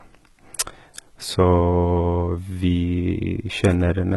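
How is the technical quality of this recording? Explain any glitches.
Throughout the speech, s sounds are gritty and lispy and the treble has a metallic sheen, with nothing above 11.8 kHz. The likely cause is HE-AAC compression, which rebuilds the top band by copying lower bands upward, so its harmonics misalign. The heavy damage fits a bitrate near 16 kbps.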